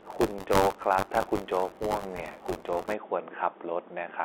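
From 0.00 to 2.94 s there is buffer tearing: the program filling the ring buffer and the hardware reading it have slipped and cross each period. Roughly a tenth of every block replays speech from about 20 ms earlier. The hard splices buzz robotically near 93.8 Hz, which fits a 512-sample buffer.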